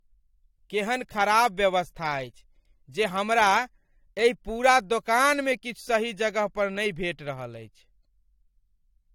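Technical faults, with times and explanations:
Throughout: low-bitrate audio saved at a high bitrate. The spectrogram is empty above 19.4 kHz, and the high-rate MP3 keeps the texture of a likely 48 kbit/s AAC source.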